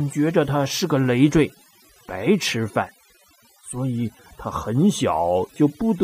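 Across the whole speech clip there is overdone noise removal. The noise reduction was set too aggressively, so it cuts individual frequency bands deep or out entirely whenever their level sits close to its noise estimate, and softer components of the voice are removed along with the noise. The gaps between phrases drop to near silence scattered with twinkling, chirpy specks.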